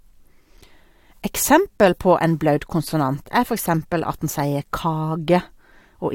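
No faults can be heard anywhere in this recording.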